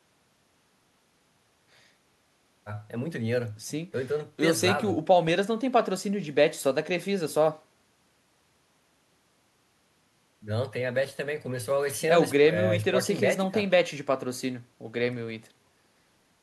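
The speech signal carries no audible technical faults anywhere in the recording.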